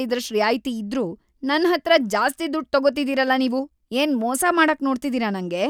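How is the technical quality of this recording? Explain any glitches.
The recording has one clear technical fault. Clock slip clicks run through nearly the whole clip, from 0.10 s to 5.69 s. A single sample is dropped or repeated about every 30 ms, around two hundred times in all. This likely comes from two devices running on separate, unsynchronised clocks that differ by roughly 700 ppm. Each slip is tiny, but at this rate they merge into a soft, steady rattle. It is most noticeable on louder stretches of speech.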